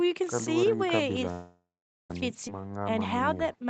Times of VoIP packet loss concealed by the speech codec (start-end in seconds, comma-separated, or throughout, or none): none